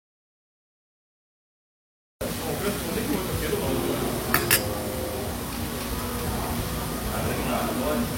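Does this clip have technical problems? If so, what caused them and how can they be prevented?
Yes. An audio dropout to silence runs from the very start until 2.21 s, so the clip opens on pure silence with no room tone before the sound cuts in. It was likely caused by a lost input, such as a disconnected device, a failed link or an accidental mute, while recording continued. Checking connections and mute states and monitoring levels before recording prevents it.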